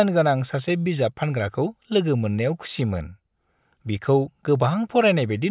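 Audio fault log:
No faults found in this speech recording.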